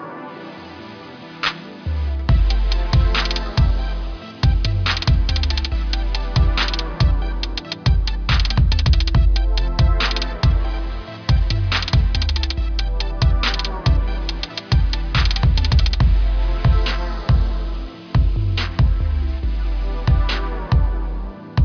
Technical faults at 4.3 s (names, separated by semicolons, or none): aliasing